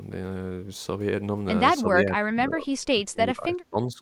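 An echo canceller most likely could not tell the near talker apart from loudspeaker echo while both sides spoke at once, and it turned everything down. From 1.84 s to the end of the clip, this speech suppressed in double talk makes the speech sink in level, at its deepest by around 25 dB. The affected speech adds up to roughly a second and a half.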